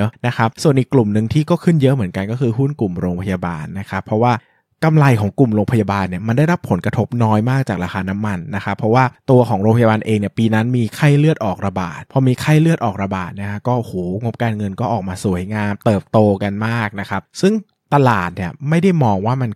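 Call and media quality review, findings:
No call or media quality faults found in review.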